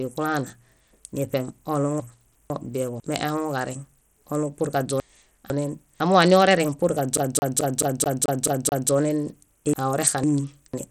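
Speech, carried throughout with plainly audible codec damage: the top end stops dead at about 17.7 kHz, and the remaining treble is grainy and unstable, with a gritty, aliased edge on the sound. That pattern is likely Bluetooth SBC compression at a small bit pool, which fits a bitrate of roughly 80 kbps. SBC splits the signal into a few wide sub-bands and hands out bits without a hearing model, so the weak upper bands are starved or zeroed and the rest are coarsely quantised. Three stretches show chunks out of order: 2.0 to 3.0 s, 5.0 to 6.0 s and 9.73 to 10.73 s. In each, two half-second blocks play swapped, with the first block arriving one slot late, so the sound jumps forward and then back. Nothing is missing, but each swap leaves three hard joins, and the passage sounds jumbled. This points to a buffering or write-ordering fault in the capture or transport path. From 7.17 to 8.91 s the audio behaves like a CD stuck on one turn: a 0.22 s segment repeats eight times in an even, rapid stutter, with a brief mute at each jump back. 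This is the signature of a laser being thrown back to the same point on every rotation, as a scratched disc does.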